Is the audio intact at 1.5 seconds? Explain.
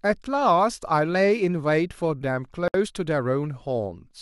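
Yes, the audio is intact at 1.5 seconds, with no dropout, click, distortion or other fault to be heard at that moment.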